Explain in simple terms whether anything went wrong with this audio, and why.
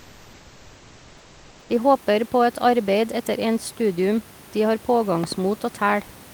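Two things went wrong. From the start to about 1.69 s, the room's natural background is replaced by comfort noise: a smooth, featureless hiss, slightly quieter than the real room noise heard later. The sender likely paused transmission while it detected no speech, and the receiver filled the gap. Unlike a dropout, the sound never goes fully silent.

Between 5.24 and 5.34 s there are two loud pops, a quick sharp double crack over the sound, which carries on underneath without a break. That separates them from a dropout or a clipped word. A sudden electrical jolt, from a plug, a switch or static, is the likely cause.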